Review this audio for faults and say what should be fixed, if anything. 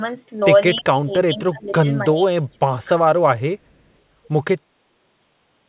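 At 0.40 to 0.44 s there is short concealed packet loss. About 20 ms of speech went missing, and the receiver patched it by extending the preceding sound into a brief smear.

From 0.79 to 2.20 s and from 2.36 to 2.74 s, the speech dips by up to about 20 and 25 dB. This is likely speech suppressed in double talk. The echo canceller turned this talker down while the far side spoke.

To fix these, give the jitter buffer more headroom against late packets, and tune the echo canceller so it keeps near-end speech during double talk.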